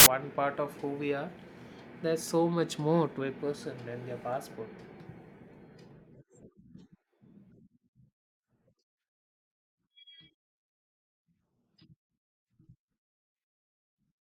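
A hard-edged burst of very loud white noise opens the speech clip, running from 0.00 to 0.06 s. This is file tags played as audio: an embedded cover picture, stored as compressed data, was decoded as samples, so its random-looking bytes emerge as loud static.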